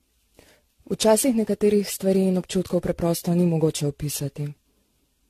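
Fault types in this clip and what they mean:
Generation loss: the speech sounds swirly, smeared and hollow, consonant attacks blur, and nothing remains above 14.1 kHz, which fits a modest AAC-LC rate near 64 kbit/s. The likely cause is around ten rounds of lossy re-encoding, each adding fresh quantisation noise and spectral gaps.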